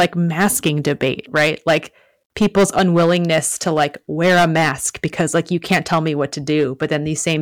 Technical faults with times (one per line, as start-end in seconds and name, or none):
0.00-7.41 hard clipping